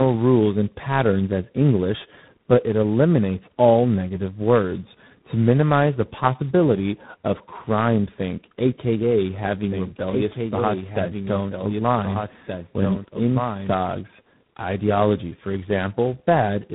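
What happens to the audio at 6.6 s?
At 6.6 s the speech shows tandem speech coding, which runs through the entire clip rather than starting there. The signal has passed through three speech coders in a row, each decoding and re-encoding the previous one's already degraded output, so their errors compound. The result is rough, muffled and warbly speech with nothing above 3.9 kHz. The final stage's grainy character fits a low-rate ADPCM coder such as G.726.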